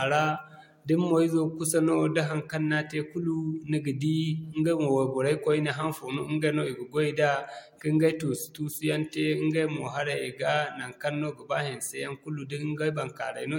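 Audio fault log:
throughout, transcoding between lossy codecs: the speech carries two layers of compression damage at once, the smeared, swirly high end of an earlier MP3-style encode at around 96 kbit/s under the softer, watery artefacts of a Vorbis encode near 59 kbit/s, likely from re-encoding an already lossy file. The second codec wastes bits on the first one's errors, so both kinds are heard together. A spectrogram shows a hard ceiling with nothing above 16.6 kHz and blotchy, fragmented detail just below it.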